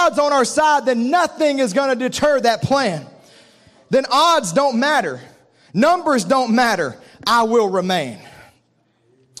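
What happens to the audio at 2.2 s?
Nothing goes wrong at 2.2 s; the speech continues intact through that moment with no dropout, click or distortion.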